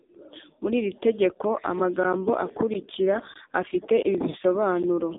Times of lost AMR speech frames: 4.30-4.37

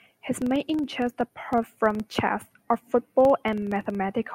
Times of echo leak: none

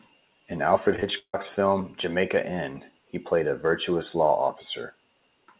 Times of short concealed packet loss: 0.96-1.04

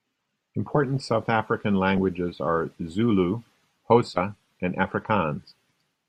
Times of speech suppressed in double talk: none

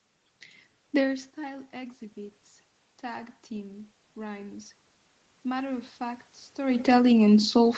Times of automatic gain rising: 3.02-4.77, 5.42-7.78

